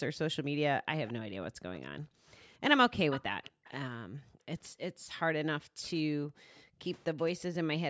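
The room background dips sharply between 0.42 and 0.55 s, falling by as much as 40 dB for roughly a tenth of a second. This is background gated by the echo canceller: while the far end's audio played out of the loudspeaker, the canceller pulled the microphone down hard. On a waveform the noise floor collapses to near-flat. On a spectrogram the faint background texture blanks out across all bands and then snaps back.

From 1.07 to 1.13 s a short, faint copy of the sound arrives about 220 ms late, around 20 dB below the main signal. This is an echo leak, likely from a loudspeaker-playing side whose canceller let part of its microphone pickup through.

Gating returns from 1.51 to 2.26 s, with drops of up to 30 dB covering about 0.4 s in patches.

A stronger echo leak runs from 3.1 to 3.72 s, delayed about 246 ms and only about 10 dB down. On a spectrogram it shows as a fainter, time-shifted ghost of the harmonic pattern.

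From 3.51 to 6.81 s the gating is at its most extensive, with drops of up to 40 dB totalling around one and a half seconds.

At 6.56 to 6.62 s, inside that stretch, a faint echo scrap about 35 dB down appears at the same 246 ms delay.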